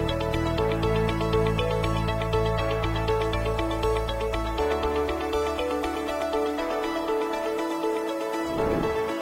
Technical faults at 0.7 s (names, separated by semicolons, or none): low bit depth without dither